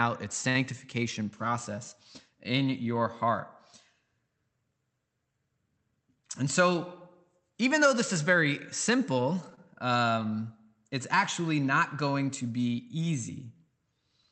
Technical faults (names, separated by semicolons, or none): short stall from a late packet; short concealed packet loss